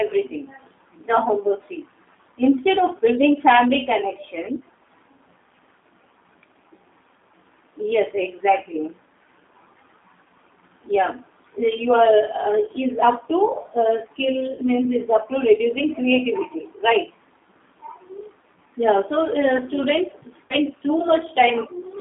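Throughout the speech, the G.729 codec leaves plainly audible damage. The line band runs from about 200 Hz to 3.6 kHz, so the sound is thin with no air on top, and the texture is slightly rough and synthetic. The decoder rebuilds each short frame from a vocal tract filter, a pitch predictor and a few pulses rather than the original waveform. The character points to the 8 kbit/s G.729A variant.

At 14.52 to 14.62 s comes the first VoIP packet loss concealed by the speech codec, about 60 ms of missing audio, which fits three lost packets. With no data arriving, the decoder keeps repeating its last pitch and filter at falling gain, so the sound smears into a brief buzzy tone or coloured noise that fades. At 20.47 to 20.54 s a second, shorter gap of about 40 ms, consistent with two lost packets, gives the same stretched, dulled effect. In both places the speech stays weak for a moment after the stream resumes, because each frame is built from the one before.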